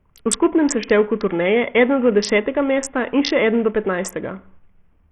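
A speech clip with heavy Bluetooth SBC compression damage throughout. The treble is thin and flickers in and out. A gritty, grainy noise and aliasing ride on the sound. This likely comes from a small bit pool that starves the upper sub-bands, fitting roughly 48 kbps.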